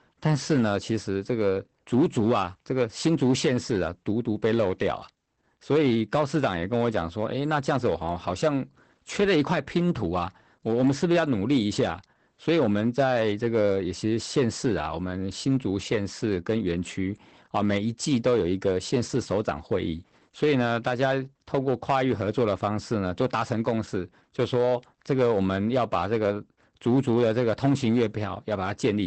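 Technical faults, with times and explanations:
Throughout: hard clipping. Some stage in the chain was driven about 8 dB past its ceiling, so the speech peaks are sliced flat. Only a few percent of the waveform goes over, and all of it on the loudest syllables. Those squared-off tops add harmonics high in the spectrum, heard as a gritty crackle on the peaks.
Throughout: Opus voice compression. The speech has been squeezed through a voice codec at a low rate. Its muffled, slightly hoarse character points to SILK-style linear-prediction coding near 12 kbps, working in 20 ms frames. Nothing survives above about 8.5 kHz, so sibilants lose their air. The coarsely coded excitation gives the voice a plainly audible, slightly robotic roughness.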